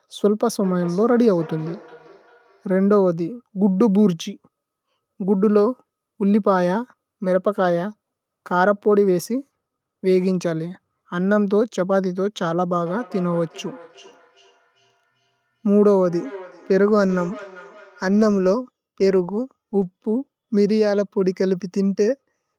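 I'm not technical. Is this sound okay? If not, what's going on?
No. From 0.63 to 2.94 s and 12.86 to 18.51 s there's feedback echo between two devices: the speech returns faintly at a steady gap of roughly 0.4 s, not as a smeared room reverberation.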